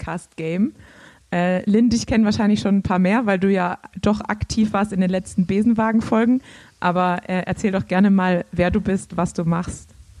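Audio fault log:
No faults are logged for this clip. Listening through the audio turns up no event that calls for an entry.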